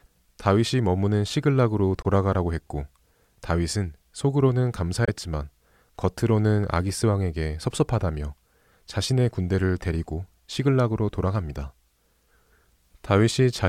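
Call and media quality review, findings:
Two brief silent gaps in the speech, 2.02 to 2.06 s and 5.05 to 5.09 s. Playback resumes further on, as if it had kept running. Likely a Bluetooth dropout. Late packets discarded at the headphones; each gap fits one lost frame of about 21 ms.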